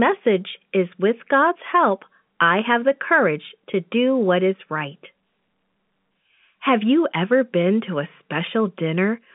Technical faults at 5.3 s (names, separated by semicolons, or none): none